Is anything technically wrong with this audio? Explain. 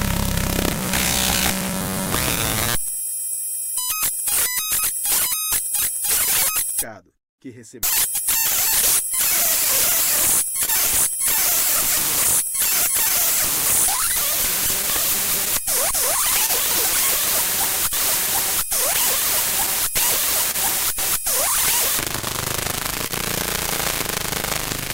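Yes. The recording carries several network playback faults layered over a timing mismatch.

Clock drift between sender and receiver runs through the whole clip. The sending device's clock runs roughly 1% slower than the receiver's, so the jitter buffer steadily drains instead of holding a stable depth. The receiver has to keep compensating by repeating short pieces of audio to stay in step. This produces small, unevenly spaced timing hiccups across the sound rather than one clear event.

Repeated timing corrections are concentrated between 2.91 and 7.47 s. Here the playback runs at 98% speed: the receiver inserts repeated fragments, adding something like 70 ms over that stretch, all in the same direction. Each insertion is small and irregularly spaced, so the effect is an unsteady tempo or slight hiccups in the sound rather than an obvious break.

A short stall from a late packet occurs at 10.65 to 10.70 s, and again at 23.07 to 23.12 s. 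In each case a packet missed its playout deadline, the buffer ran dry, and the receiver held the last sound, filling 25 ms and then 30 ms. Playback then resumed from the same point, with nothing lost. Each stall is heard as a sound lingering a moment too long, with a slight buzz or dip.

Scattered short gaps fall in two stretches: 12.24 to 16.50 s, with around seven gaps totalling roughly 70 ms, the longest about 20 ms; and 18.26 to 20.56 s, with around four gaps totalling about 50 ms, the longest around 30 ms. Each hole left by a lost or late packet was patched by extending the preceding sound. This concealment covers about 2% of each stretch and is heard as brief ticks or smears between clear passages.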